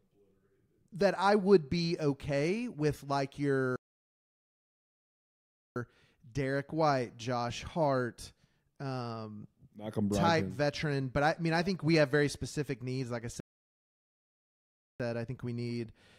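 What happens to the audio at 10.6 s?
Nothing goes wrong at 10.6 s; the speech continues intact through that moment without any dropout, click or distortion.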